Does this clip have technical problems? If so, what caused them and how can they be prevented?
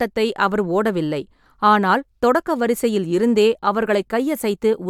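No, this clip does not have technical problems, so there is no cause to identify or prevent.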